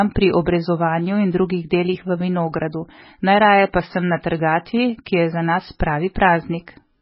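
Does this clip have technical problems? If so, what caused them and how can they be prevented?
Yes. Throughout, nothing sounds above 5.6 kHz and the speech is watery and swirly. That points to heavy, likely MP3 compression at around 16 kbps. Prevent it by encoding at a higher bitrate.

At 6.14 s, just after "je za nas", a 16 ms hiss precedes a sharp attack. This is pre-echo: block-spread quantisation noise leaks ahead of the onset. A higher bitrate or shorter transform blocks prevents it.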